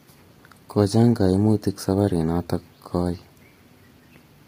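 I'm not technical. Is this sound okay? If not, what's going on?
No. Low-delay AAC compression affects the whole clip: the speech sounds rough and grainy, with a hiss-like fizz between the pitch tones and a dull or artificial top end. This is likely a video-call codec squeezing speech into very short chunks, heavily.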